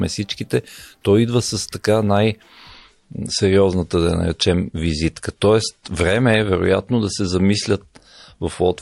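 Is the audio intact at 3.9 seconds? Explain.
No, not quite. At 3.9 s you're inside a stretch where an adaptive stream at a lower bitrate took over. It runs from 2.69 s to the end of the clip. The player switched down mid-stream, probably because the connection slowed. The sound fits a drop from about 128 kbit/s MP3 to about 51 kbit/s. You hear a sudden quality change with no gap. Codec artefacts increase, and nothing comes through above 11.2 kHz, so the treble drops.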